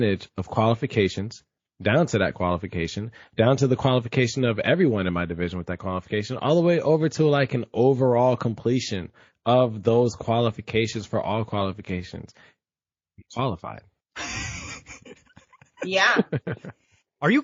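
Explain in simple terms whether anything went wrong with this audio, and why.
Yes, something's off for the whole recording: the speech has a watery, swirly quality, and the s sounds come out as metallic chirps. That's likely MP3 compression squeezed too hard, so the encoder dropped the quieter detail.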